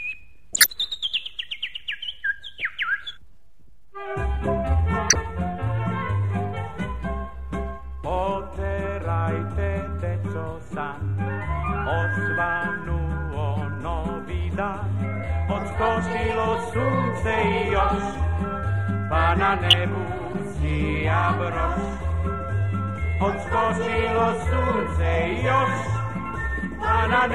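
The audio has corrupt frames decoded at four points, heard as short chirps or bursts of misplaced energy at 0.53–0.67 s, 2.59–2.62 s, 5.09–5.16 s and 19.70–19.77 s. Bit errors in the compressed stream gave the decoder wrong gains or misread codes, and it played each damaged frame anyway. The longest event spans what sounds like several consecutive frames, the others a few. The burst at 2.59 s sits about 15 dB below the other three.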